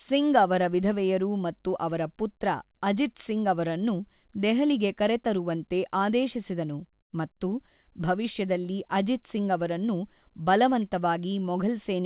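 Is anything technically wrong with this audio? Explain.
Yes. From 7.01 to 7.13 s, between "ಅವರನ್ನು ದೆಹಲಿಗೆ ಕರೆತರುವಂತೆ ಆದೇಶಿಸಿದನು" and "ಮತ್ತು ಭವಿಷ್ಯದಲ್ಲಿ ಅಜಿತ್ ಸಿಂಗ್", there is comfort noise in place of the background. For about 120 ms the real room tone drops about 15 dB and turns into a flat, featureless hiss, likely because the sender paused transmission and the receiver filled in synthetic noise. Unlike a dropout, the gap is never silent.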